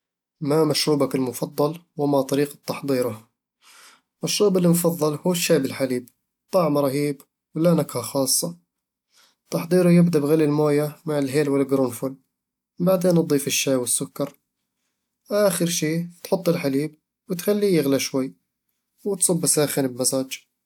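No technical faults are audible anywhere in the recording.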